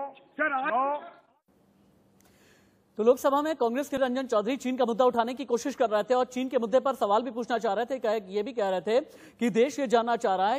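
At 3.97 s there is a brief glitch caused by damaged data in a compressed stream. Corrupted bytes in the encoded frames there cause the decoder to misread them, lose frame sync and search for the next valid header before playback resumes.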